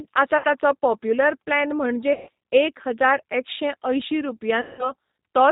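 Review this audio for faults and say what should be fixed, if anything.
The whole clip carries G.729 codec damage, and it is plainly audible. Nothing above 4 kHz survives. The speech is rebuilt from a vocal tract filter and a few pulses per frame, so it sounds rough and synthetic. The sound points to 8 kbit/s G.729A. To prevent it, use a wideband codec such as G.722 or Opus.

VoIP packet loss concealed by the speech codec occurs three times. The first is at 0.38 to 0.47 s, just before "ताचो पॉप्युलर प्लॅन", with about 60 ms lost. The second is at 2.13 to 2.29 s, right after those words, with 140 ms lost. The third is at 4.61 to 4.92 s, with 180 ms lost. Each time the decoder stretches its last pitch and filter into a fading buzzy tone or coloured noise. The speech stays weak after it resumes. To prevent it, fix the network loss or add forward error correction and a better jitter buffer.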